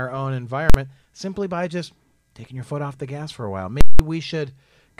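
A loud bang at 0.70 s, just before "simply by just taking", and a pair of very loud pops at 3.81 and 3.99 s with silence between, after "gas for a while", are invalid numbers at full scale. A calculation produced infinite or invalid values that pinned the output at one extreme for a whole block, about 46 ms, consistent with a 2048-sample block, and then about 186 ms, consistent with an 8192-sample block.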